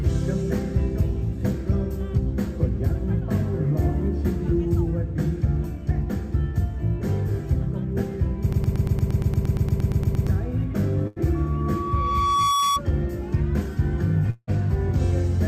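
From 8.53 s to 10.27 s the sound stutters on a single fragment about 116 ms long, repeated exactly and back to back 15 times, with a mechanical, machine-gun regularity. This broken-record loop most likely comes from the player, encoder or stream stalling and re-sending the last chunk it still held. Whatever should have been heard during those 1.7 seconds never plays; the repeating sliver simply stands in for it.

At 11.07 s a burst of packet loss interrupts the sound for about a tenth of a second, ending at 11.18 s. For roughly 87 ms the last sound is stretched out and dims as it goes, becoming a held buzz or fading hiss rather than real content. Playback then picks up again further along, with about 80 ms of the original skipped over, so the moment jumps slightly forward.

Beginning at 11.34 s a pure tone at 1.1 kHz rises out of the mix, swelling over about a second into a squeal that sits around 5 dB above the wanted sound before it stops at 12.81 s. 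This is loudspeaker feedback squeal: a microphone was hearing the loudspeaker it feeds, and at 1.1 kHz the loop gain passed unity, so that one frequency kept feeding itself and grew.

From 14.30 s to 14.49 s the sound collapses into a fading buzz or hiss lasting about 173 ms, followed by roughly 30 ms of near silence before normal audio returns further on, about 180 ms of material gone. This long network dropout most likely reflects a stretch where nothing reached the receiver, which papered over the hole by extending and fading the last sound until it had nothing left to offer.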